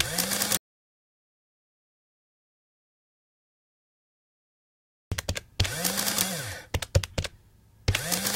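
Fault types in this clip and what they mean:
Audio dropout to silence: from 0.57 s to 5.12 s the sound stops dead, leaving about 4.5 s of silence, likely from a lost input link while recording continued. Unlike a quiet passage or noise gate, no room tone or decay remains.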